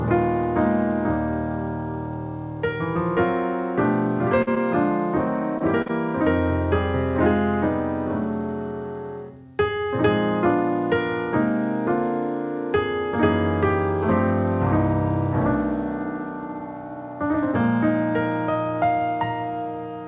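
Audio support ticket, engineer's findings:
Burst of packet loss, 4.42–4.49 s: sound holds and fades for about 47 ms, then jumps ahead with about 40 ms missing. Network loss across consecutive packets; the receiver extended the last sound and attenuated it before resuming, audible on this G.711 path with nothing above 4 kHz.

Short concealed packet loss, 4.55–4.58 s, 5.58–5.62 s, 5.82–5.88 s, 5.88–5.91 s: brief smears or wobbles, the last two back-to-back. Each event lost 20–40 ms in transit; the decoder continued the prior sound for 11–38 ms, then blended back into real audio.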